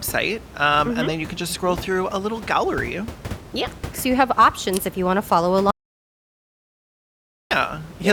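At 5.71 s, just after "you want to follow", the input was most likely lost while the recorder kept writing silence: an audio dropout to silence. Until 7.51 s, 1.8 s of speech is gone, and even the room noise, about 16 dB below the speech, vanishes entirely.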